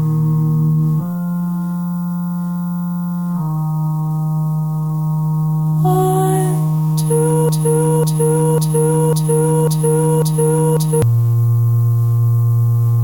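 From 7.49 s to 11.02 s the audio falls into a broken-record loop: one fragment about 0.55 s long plays six times back to back, each pass an exact copy, while whatever should have followed is lost. The likely cause is a player, encoder or stream stalling and resending the last block it held. Unlike an echo or reverb tail, nothing decays or overlaps; the repeats are identical, abutting copies at a fixed rate.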